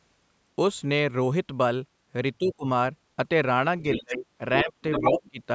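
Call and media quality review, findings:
Speech suppressed in double talk at 2.39–2.66 s, 3.98–4.26 s, 4.63–4.74 s and 5.11–5.4 s. The talker dips by up to about 25 dB, less at 4.63 s. The likely cause is the echo canceller ducking the talker along with the loudspeaker echo while both ends talk at once.

Other side's voice leaking through at 3.84–4.0 s, 4.58–4.72 s and 4.92–5.3 s. A second voice sits about 10 dB below, then about 5 dB below, then level with the talker. This is likely residual loudspeaker echo that the canceller failed to remove, band-limited to 8 kHz like the mic path.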